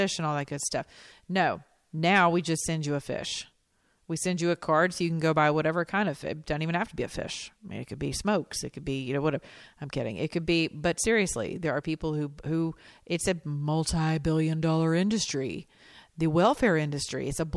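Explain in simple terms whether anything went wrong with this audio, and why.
Nothing went wrong: the speech comes across steady and intact, with no breaks, dropouts or unwanted noise anywhere in the recording.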